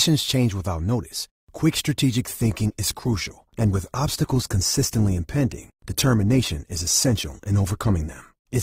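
At 2.27 s the speech quality drops abruptly with no gap, as an adaptive stream shifts to a lower bitrate. Codec artefacts rise through to the end, which fits a switch from about 64 to 16 kbit/s Opus.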